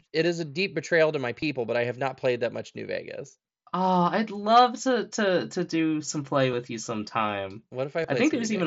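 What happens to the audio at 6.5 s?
At 6.52 s, between "to do some play" and "with you sometime", there is concealed Bluetooth headset packet loss. About 7.5 ms of audio, consistent with a single lost frame, is refilled from the preceding waveform, so the gap is nearly inaudible.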